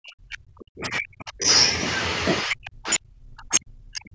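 A speech recording whose talker is pushed down twice, from 0.0 to 1.47 s and again from 2.43 to 4.15 s, each stretch lasting around a second and a half and dropping by about 40 dB at its deepest. The pattern points to speech suppressed in double talk, likely an echo canceller mistaking the talker for loudspeaker echo. On a waveform the envelope collapses in those spans; a spectrogram shows the energy dropping across them.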